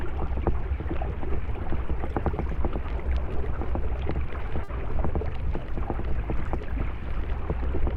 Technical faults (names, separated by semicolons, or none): short stall from a late packet